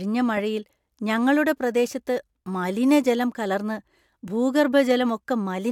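Nothing technically wrong turns up anywhere in this short bit of speech, so there's no fault to point to or explain here.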